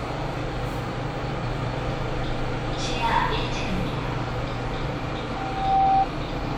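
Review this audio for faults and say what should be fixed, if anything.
Loudspeaker feedback squeal from 5.22 to 6.07 s: a 776 Hz tone swells over about half a second to roughly 10 dB above the sound, as mic-to-speaker loop gain exceeds unity. Prevent it by reducing loop gain, notching 776 Hz, or moving the microphone away from the loudspeaker's coverage.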